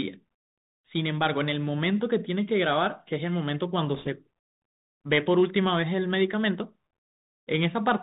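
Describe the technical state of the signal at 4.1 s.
Around 4.1 s, bit errors on a Bluetooth voice link have just finished, spanning 3.95 to 4.07 s. Flipped bits, at a rate of around one percent, each nudge the delta-modulated waveform only slightly and fade rather than persist. The result is a rushing crackle rather than the sharp clicks of packet loss.

Underneath, the Bluetooth CVSD headset codec is plainly audible. Its one-bit up-or-down coding, which fits a 64 kbps link, removes everything above 4 kHz, roughens s sounds and leaves a granular hiss. This steady hiss distinguishes it from the brief, rushing burst of the bit errors.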